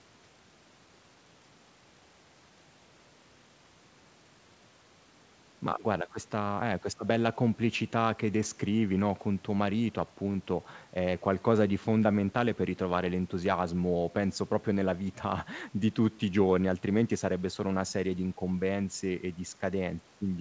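No technical faults are audible.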